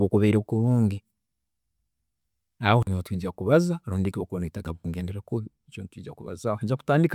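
No technical faults can be heard anywhere in this recording of speech.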